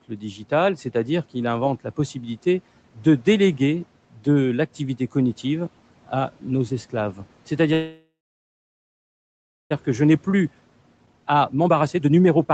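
A speech recording carried over a call link, with content that stops at 8 kHz, consistent with Opus at around 32 kbps, and room noise about 25 dB below the voice. From 0.09 to 0.41 s, speech is cut by the noise suppressor, which dips the weakest sounds by up to about 8 dB over roughly a tenth of a second. On a spectrogram, their faint energy is thinned out alongside the background. After "cognitive à nos esclaves", at 7.73 s, a call audio freeze sets in. The final sound stretches into a decaying buzz or hiss, then goes silent for about 1.58 s, and the audio resumes at 9.73 s with nothing lost. The whole gap is about 1.97 s, likely packets delayed until the jitter buffer emptied. A waveform shows a fading tail, then a flat line. From 10.02 to 12.48 s, a jitter buffer speed-up plays the speech at about 126% of normal pace without altering pitch, trimming roughly 0.7 s in small pitch-period cuts. 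On a spectrogram, the syllables look compressed while the harmonic spacing stays unchanged.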